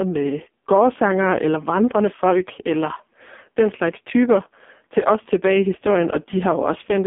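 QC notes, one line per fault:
Throughout: AMR narrowband mobile codec. The line band runs from 200 Hz to 3.5 kHz, with nothing above 3.6 kHz. The speech is heavily damaged and sounds buzzy and synthetic. A vocal-tract model is driven by sparse pulses, which fits a rate near 5.15 kbps.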